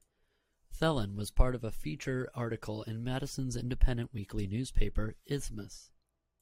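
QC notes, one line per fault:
Nothing stood out on listening.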